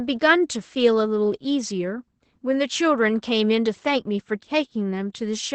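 Throughout, the speech carries Opus voice compression in SILK mode: nothing above 8.9 kHz, and a plainly muffled, hoarse, faintly robotic quality that fits about 12 kbps.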